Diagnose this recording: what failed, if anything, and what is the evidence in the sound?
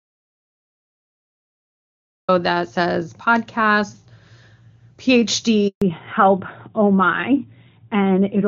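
Audio dropout to silence, at the input stage: the clip opens already silent and stays silent until 2.28 s, with no room tone. On a waveform it is a flat line. The likely cause is a lost or muted input while the recorder kept writing silence.

Handover gap, on the network: at 5.68 s the speech fades within a few tens of milliseconds and stays silent for 140 ms, until 5.82 s. No speech frames arrived while the call switched networks, which shows as a short blank column on the spectrogram.

Fallback to narrowband, in the codec: from 5.82 s to the end, the call drops from clean AMR-WB at 23.85 kbit/s to AMR-NB at 12.2 kbit/s. Everything above 4 kHz disappears, so the spectrogram's upper band goes abruptly empty and the sound turns duller and rougher.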